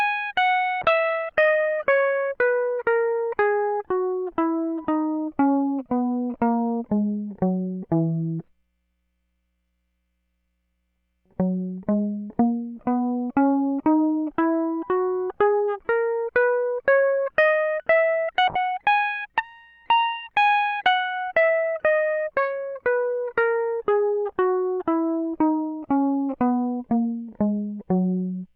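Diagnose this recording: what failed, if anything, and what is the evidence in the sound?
Call bitrate drop at the codec: music goes muffled and watery at 0.82–5.93 s and 18.49–25.75 s, which fits an encoder squeezed to about 19 and 25 kbps.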